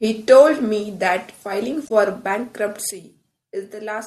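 At 1.85 s, just after "that filing", part of the compressed stream is corrupted, so the decoder misreads the frames there and has to resync on the next frame header. Until 1.91 s the speech gives way to a brief glitch.

At 2.91 s the level drops by about 10 dB in a single step, likely a sudden gain jump where a gain change was applied without any ramp. The speech and the background noise fall together, and the quieter level holds to the end.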